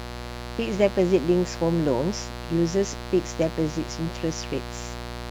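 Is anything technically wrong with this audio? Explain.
Yes. Mains buzz runs through the whole speech clip. It is a steady, raspy buzz built on 60 Hz. Sharp switching spikes from a dimmer, rectifier or poor shielding enter twice per cycle. Their harmonics climb into the kilohertz range. The buzz sits fairly loud, roughly 10 dB below the speech.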